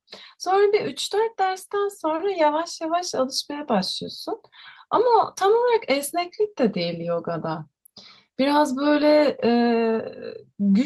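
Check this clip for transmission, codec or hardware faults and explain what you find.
Two brief patches of lost packet rebuilt from error correction turn up, at 0.75 to 0.77 s and 8.95 to 9.01 s. The first spans about 20 ms, fitting one lost packet. The second is rebuilt over about 40 ms, fitting two packets. In each case the following packet carried a low-bitrate backup copy, which the decoder played instead, so the speech runs on without a gap but sounds briefly coarser and grainier. Unlike a dropout there is no silence, and unlike guessed concealment there is no buzzy, smeared extension of the previous sound.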